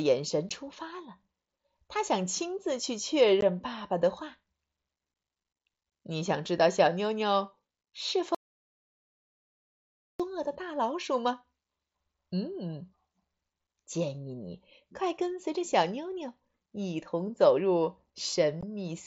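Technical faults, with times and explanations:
0.49 s, 3.41 s and 18.61 s: unconcealed Bluetooth headset packet loss. Each time, the radio link between headset and phone failed to deliver a short burst of voice data, about 15 ms, which fits two lost mSBC frames. Nothing was patched in to hide the gap, so the speech has a tiny hole with hard edges at each point.
8.35–10.20 s: audio dropout to silence. The input signal stopped reaching the recorder for about 1.85 s, most likely because the headset link failed or the device briefly disconnected, while the recording kept writing silence. The speech cuts off abruptly into silence with no room tone underneath. It then resumes mid-flow, and whatever was said during that stretch is gone, with the mSBC wideband character returning unchanged afterwards.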